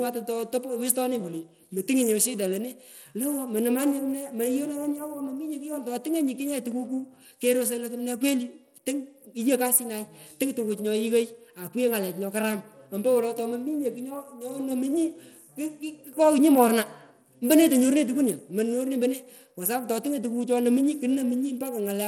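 From start to finish the speech carries plainly audible coding damage, most likely Bluetooth SBC compression squeezed into a small bit budget that points to roughly 96 kbps. SBC splits the signal into a handful of wide sub-bands and hands out bits with no real model of hearing, so the faint upper bands get starved and the rest is coarsely quantised. You hear the top end thinning and flickering, with nothing at all above 18.8 kHz, and a gritty, aliased edge on the sound.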